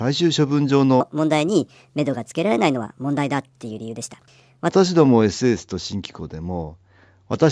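From about 1.01 s to 4.7 s the speech jumps up into a chipmunk register and rushes along. That's a wrong sample rate. The samples are clocked out faster than they were captured, with no resampling, so speed and pitch rise together. It runs about 1.38 times too fast and roughly 5.5 semitones sharp, which fits 16 kHz material played at 22 kHz. After 4.7 s the speech drops back to its natural pace and pitch.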